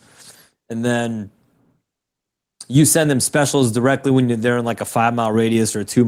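No technical faults can be heard anywhere in this speech recording. Nothing in it calls for a time stamp or an account of something going wrong.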